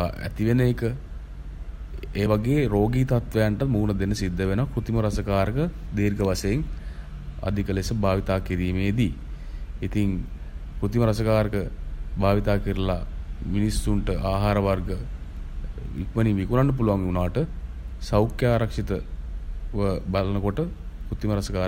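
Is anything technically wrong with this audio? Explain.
Yes. The speech has compressed frames skipped at three points: 2.25 s, 11.52 s and 17.44 s. At each, whole blocks of the coded stream never reached the output, either lost from the file or rejected by the decoder as damaged. The first two drop about one frame, roughly 20 ms of audio. The third drops about two, around 50 ms, which fits a frame length near 23.2 ms. At each point the audio jumps ahead by the length of the missing frames.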